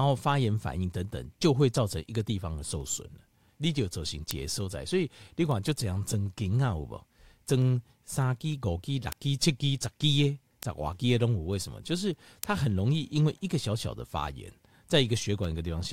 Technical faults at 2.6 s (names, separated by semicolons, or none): word clock ticks